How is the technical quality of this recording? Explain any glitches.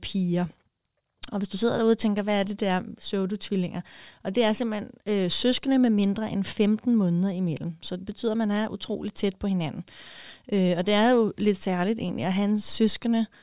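No glitches or technical faults can be heard anywhere in the recording.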